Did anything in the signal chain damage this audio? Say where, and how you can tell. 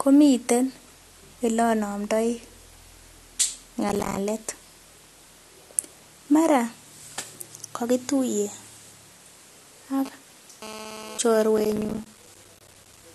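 Yes. A gritty, tearing crackle rides on the speech from 3.89 to 4.17 s and again from 11.58 to 13.03 s. This is processor overload crackle at the driver or buffer stage. The processor repeatedly missed its deadlines, and each late buffer dropped out as a hard-edged silent gap. The gap spacing fits buffers of about 5 ms.

From 10.06 to 11.18 s a hard, raspy buzz sits about 15 dB below the speech and pulses irregularly. This is GSM phone buzz entering the analogue wiring. A nearby phone transferring data sent radio bursts at 217 Hz, which the audio circuit rectified into a harmonic-rich tone.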